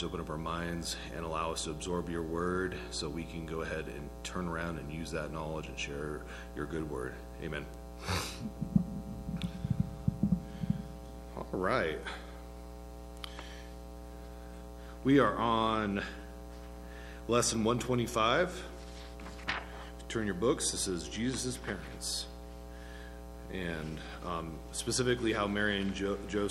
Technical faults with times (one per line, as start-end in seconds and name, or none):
none